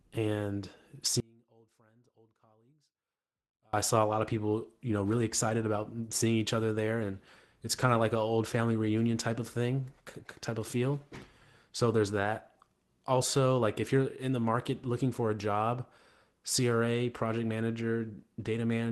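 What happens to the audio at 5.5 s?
At 5.49 s there's a lost packet rebuilt from error correction. The audio doesn't drop out. Instead, for about 20 ms it turns rougher and noisier, which fits a single lost Opus packet. The next packet carried a low-bitrate backup copy of that stretch, and the decoder played the backup in its place. You get a short grainy patch rather than a gap, sitting inside the Opus call audio, which tops out around 12 kHz.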